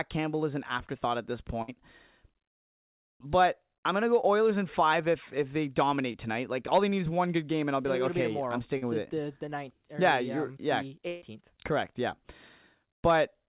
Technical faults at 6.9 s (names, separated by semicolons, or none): short concealed packet loss